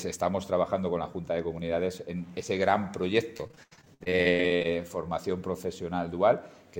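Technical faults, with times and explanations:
3.37–4.66 s, repeated packet loss (robotic sound): a rapid string of holes, the longest about 84 ms, is each patched by stretching the preceding sound, so roughly 40% of this stretch is filler, giving a choppy stutter rather than a single clean dropout.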